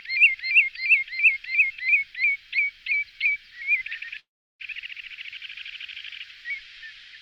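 At 4.19 to 4.63 s, a call audio freeze: the last sound smears into a fading buzz or hiss, then roughly 0.34 s of silence, likely from delayed packets draining the jitter buffer. Audio then resumes intact, about 0.4 s late.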